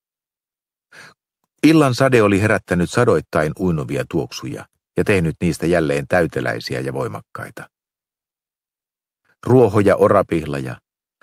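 At 4.49 to 4.54 s, a short stall from a late packet: the jitter buffer ran empty, so the receiver stretched the preceding sound by 21 ms, then resumed without loss.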